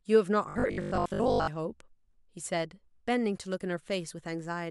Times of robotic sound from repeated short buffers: 0.50-1.48

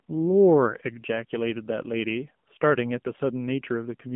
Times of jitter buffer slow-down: none

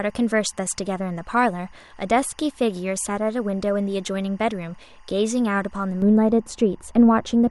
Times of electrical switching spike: none

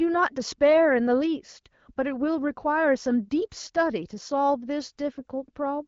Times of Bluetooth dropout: none

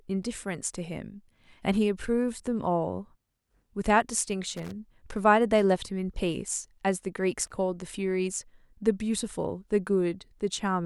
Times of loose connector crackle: 4.57-4.71, 7.39-7.52

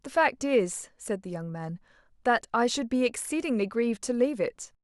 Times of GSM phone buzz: none

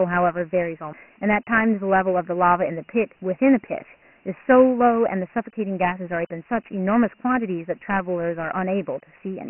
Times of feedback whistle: none

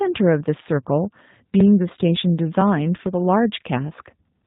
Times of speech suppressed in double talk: none

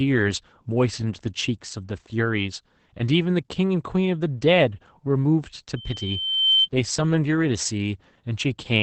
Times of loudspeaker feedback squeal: 5.76-6.68

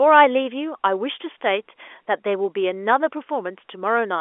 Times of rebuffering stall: none

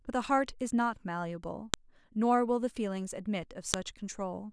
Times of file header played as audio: 1.74, 3.74

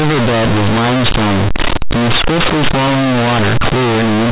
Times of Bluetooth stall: none

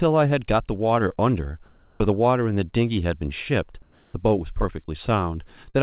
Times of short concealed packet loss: 4.86-4.90, 5.70-5.76

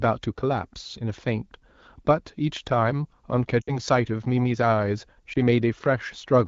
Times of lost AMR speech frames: 3.62-3.77, 5.33-5.39

